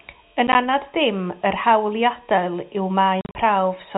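Around 0.47 to 0.55 s, and again from 3.21 to 3.35 s, the speech drops out in little hard-edged gaps. That's packet loss filled with silence, with runs up to 40 ms that fit 10 ms packets going missing.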